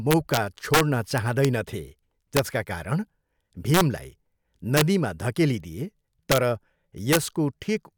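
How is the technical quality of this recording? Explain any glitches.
The speech is marred by integer overflow at 0.11–0.37, 0.74–0.81, 1.18–1.45, 2.37–2.39, 3.74–3.81, 4.77–4.81, 6.32–6.38 and 7.13–7.17 s. Peaks pushed about 0–3 dB past full scale wrap to the opposite sign, giving harsh cracks. On a waveform the peaks jump rail to rail, and a spectrogram shows broadband vertical streaks.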